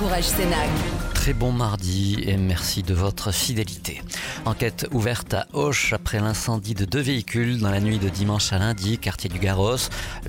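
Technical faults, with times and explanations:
No technical faults can be heard anywhere in the signal.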